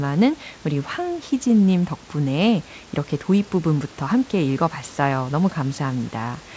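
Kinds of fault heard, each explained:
No technical faults are audible in this speech: the call path carries it through its usual wideband coding with nothing above 8 kHz, and the room's background sits about 27 dB below the speech.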